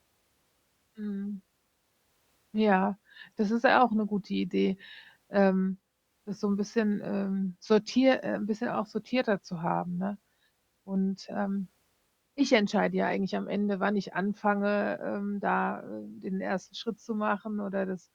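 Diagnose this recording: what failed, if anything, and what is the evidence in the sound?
Nothing in the chain failed; across the whole recording the speech carries no audible evidence of a defect at any stage from wiring to playback.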